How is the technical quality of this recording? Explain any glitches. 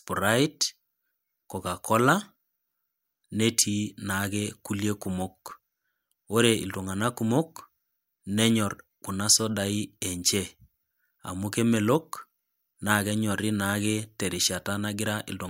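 The speech carries two brief glitches, both an underrun with held sample. At 5.51 s, and again at 10.02 s just after "kuna sodai", the sound freezes for about 1.3 ms and then resumes. The output buffer ran dry, so the converter held its last value and the waveform went flat until data returned, a gap of 64 samples. Because a millisecond or two of live audio was lost in the meantime, playback jumps forward when it restarts.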